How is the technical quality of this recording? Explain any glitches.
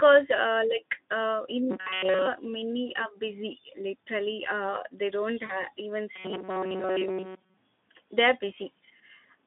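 The recording has one glitch, a short dropout in the call audio. It is carried over a narrowband Speex link that keeps roughly 200 Hz to 3.5 kHz, with light codec roughness.

From 5.45 to 5.66 s there is VoIP packet loss concealed by the speech codec. About 40 ms of audio went missing, which fits two lost frames. The decoder filled the gap by repeating its last pitch and filter settings at falling gain. The sound smears into a brief buzzy tone or coloured noise that fades. It stays weak or distorted for a moment after the stream resumes.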